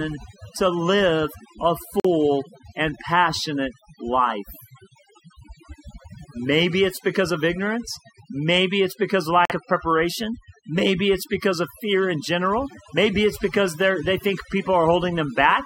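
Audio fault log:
Throughout: overdone noise removal. A noise reduction stage set far too aggressively pulls individual frequency bands down to nothing whenever they sit near its noise estimate. The background drops and breaks up into twinkling specks, and quieter parts of the speech vanish.
2.00–2.06 s and 9.45–9.52 s: corrupt frame muted. Right after "to live a", and between "it's because" and "of preparation", the audio drops abruptly into silence for about 65 ms. Damaged compressed frames were rejected by the decoder, and each gap's length points to two lost frames. Timing stays intact.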